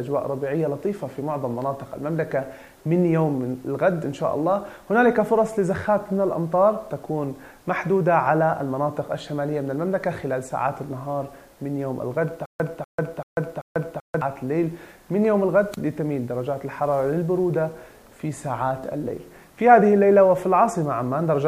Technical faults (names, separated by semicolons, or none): stutter with silent gaps